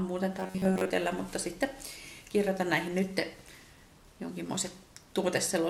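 From 0.40 to 0.91 s the sound collapses into a rigid metallic buzz near 93.8 Hz: robotic sound, likely from repeated short buffers replacing most of the incoming audio.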